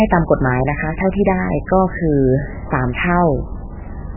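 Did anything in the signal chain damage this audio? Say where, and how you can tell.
Yes. The damage sits at the codec stage, and it runs through the whole speech clip. Nothing is left above 3 kHz, so the top is cut off flat. The speech has a watery, swirling quality, and the damage is heavy. This is likely MP3 compression at a very low bitrate, which fits about 8 kbps. Starved of bits, the encoder chops the treble at a fixed point. It also drops weak frequency lines that flicker in and out between frames.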